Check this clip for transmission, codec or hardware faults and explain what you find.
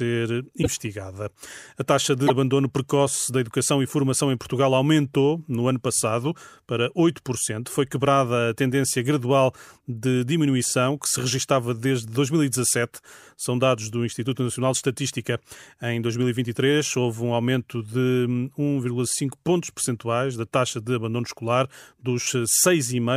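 There are two short glitches in this speech clip, both of the same kind. A broken MP3 bit reservoir is the likely cause, at 0.62 to 0.67 s and 2.26 to 2.31 s. Each time the audio skips ahead. Frames of about 26 ms seem to have been lost, and the frame after each gap pulled its borrowed data from the wrong bytes.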